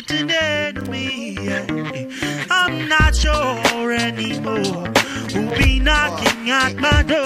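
At 0.81 to 0.88 s, a brief loose connector crackle breaks through. A worn contact is making and breaking. The audio chops. It returns, longer, from 5.22 to 5.65 s as an irregular, scratchy burst.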